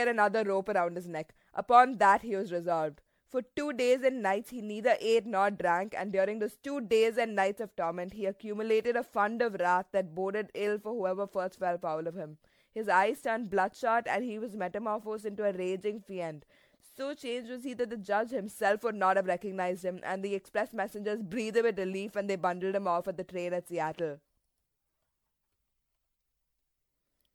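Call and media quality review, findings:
Generation loss, throughout the speech. Swirly, smeared, hollow texture with blurred attacks, though the band still reaches 19.9 kHz. Likely cause: repeated MP3 decode/re-encode, around seven passes, fitting a 96 kbit/s chain. Unlike a single low-bitrate encode, the artefacts exceed what that bandwidth predicts.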